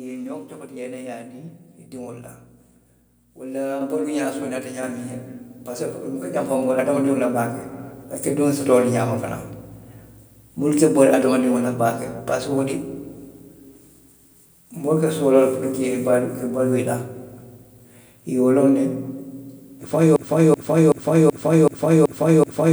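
At 3.81 s and again at 4.83 s, the microphone volume is stepped up, each time by about 5 dB in a single instant. Voice and background noise jump together, which separates an input-gain change from a talker simply speaking louder, where the room sound would stay put.

From 20.16 s to the end, a broken-record loop takes over: the same 379 ms fragment plays seven times back to back with no variation. A stalled stream that kept resending its last buffer is the likely cause. Unlike an echo, nothing new arrives underneath, and the audio for that span is lost.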